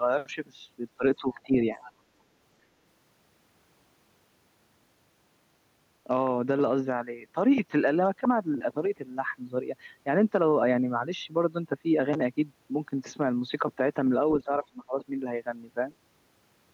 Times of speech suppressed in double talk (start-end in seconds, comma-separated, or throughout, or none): 0.98-1.82, 14.44-14.95